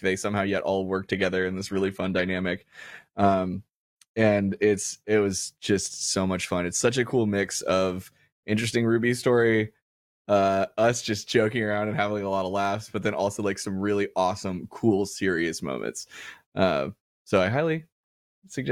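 Speech, and from 0.95 to 4.95 s, right after "they somehow yet all" and until "it was just so", there's an adaptive stream at a lower bitrate: the quality suddenly drops and codec artefacts rise, which fits a switch down to a low-rate HE-AAC version around 24 kbit/s, then it snaps back without a gap. There are also two sharp single clicks, at 11.30 s after "story uh us just" and at 12.65 s after "having a lot of". Those are likely dropped samples, just a handful missing each time, so the waveform jumps and you hear a thin tick.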